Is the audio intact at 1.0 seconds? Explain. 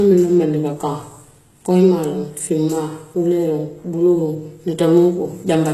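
No. Throughout the clip, including 1.0 s, the speech likely went through HE-AAC compression at a very low rate, around 16 kbps. The treble is rebuilt from copied lower bands and stops at 12.3 kHz, so s sounds come out gritty and metallic.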